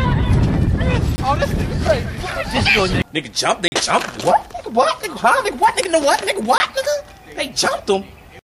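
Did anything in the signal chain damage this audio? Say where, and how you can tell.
Yes. The damage is at the driver or buffer stage: the audio contains three blocks of digital silence, at 1.16–1.18 s (20 ms), 3.68–3.72 s (40 ms) and 6.58–6.60 s (20 ms). Each is a hard cut to zero and back with no fade, and the longer block is heard as a brief hole. Whole-block dropouts like these indicate that the output buffer was not filled in time.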